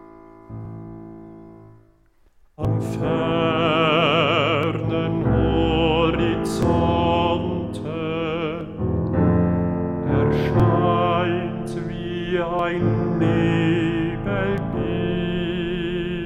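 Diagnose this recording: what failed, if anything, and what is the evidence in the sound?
Overlap between stream segments at playback: brief skips at 0.65, 2.65, 4.63, 6.63, 8.61, 10.6, 12.59 and 14.58 s recur every 2 s. At each, overlapping segment timestamps are trimmed, cutting 5 to 16 milliseconds of real audio. This shows as waveform discontinuities and thin vertical spectrogram lines.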